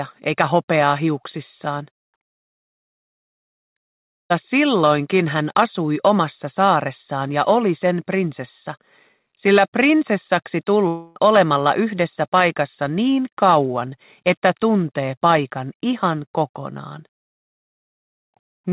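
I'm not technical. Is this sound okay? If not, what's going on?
No. Long network dropouts at 4.0 to 4.32 s and 10.88 to 11.29 s: about 0.3 s of audio likely never arrived, so the receiver stretched the last sound into a fading buzz before the sound resumed with that part missing.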